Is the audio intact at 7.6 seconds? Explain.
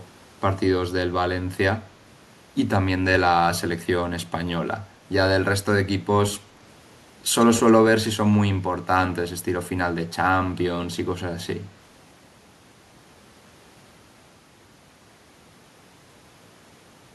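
No. At 7.6 seconds the speech carries an echo leak, running from 7.40 to 7.72 s. A delayed copy of the speech trails the original by 142 ms, sitting roughly 10 dB below it, so it sounds like a repeat of the voice. The likely cause is a far-end loudspeaker whose echo canceller failed to fully subtract what its microphone picked up, sending that residue back into the call.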